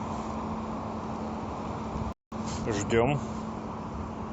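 At 2.13 s the speech halts for a rebuffering stall lasting until 2.32 s. Playback drained its downloaded audio and waited for more data, so about 0.19 s of silence is inserted. The speech then picks up exactly where it stopped, with nothing skipped, only delayed.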